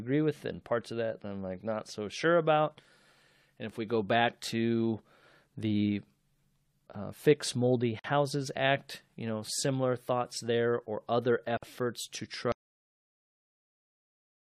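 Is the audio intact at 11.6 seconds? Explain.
No. A gap at a join of encoded pieces opens from 11.57 to 11.63 s, right after "thoughts there or other". It is a 52 ms gap left by encoder delay and padding, shown as a flat waveform and blank spectrogram column with smeared edges.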